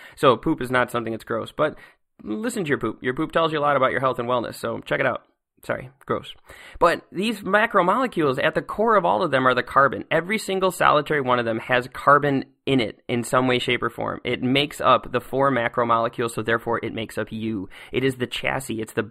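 Speech with channel delay (comb filtering) throughout: one channel lags by roughly 0.1 ms, a few samples, so the mono sum cancels near 5 kHz and its odd multiples, sounding hollow.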